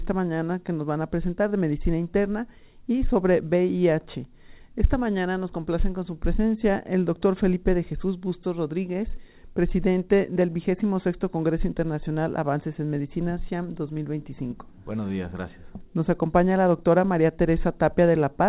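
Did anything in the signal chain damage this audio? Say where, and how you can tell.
No, nothing stood out on listening; the audio has the narrow band of a telephone-style call path, with nothing above 4 kHz, which fits G.711 A-law at 64 kbps working as designed.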